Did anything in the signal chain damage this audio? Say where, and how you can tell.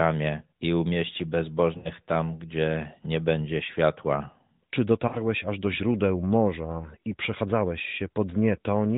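Yes, in the network stage. At 1.78–1.90 s, after "i umieści", and 5.08–5.24 s, before "aż do źródeł", the sound is drawn out and fades, then returns weak or rough. These are lost AMR speech frames (about 60 ms and 40 ms), concealed by the decoder repeating its last good parameters at falling gain.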